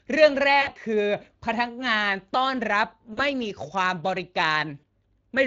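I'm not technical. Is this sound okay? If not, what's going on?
No. Throughout the recording the voice has a rough, hoarse, noisy grain, as if heard over an old internet call or game chat. That is Speex codec damage. Speex is an older speech compressor that squeezes the voice into a small amount of data by rebuilding it from a simplified model. In this clip it doesn't have enough detail to rebuild the voice cleanly, so the fine texture turns gritty and hoarse.

There are also three short glitches, at about 0.61 to 0.72 seconds, 3.13 to 3.20 seconds and 4.79 to 4.85 seconds. At each one the voice briefly smears into a buzzy tone or a noise that fades, and it sounds weak or off for a moment afterwards. This is VoIP packet loss concealed by the speech codec. Pieces of the audio, about 60 milliseconds at the first spot and about 40 milliseconds at the other two, never arrived. The decoder covered each hole by stretching out the last sound it had and letting it fade, and it needed a moment to recover once real audio returned.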